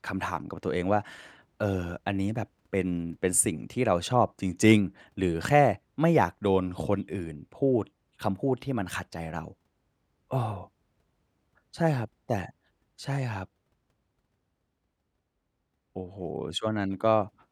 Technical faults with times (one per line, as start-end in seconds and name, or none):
11.94 block of digital silence